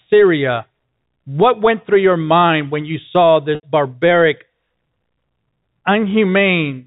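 At 3.55 to 3.63 s, packet loss with pitch repetition removes about 80 ms of speech, consistent with roughly eight 10 ms packets. The receiver fills the gap by repeating the last pitch period, producing a brief held, buzzy sustain before normal speech resumes over the G.711 telephone path.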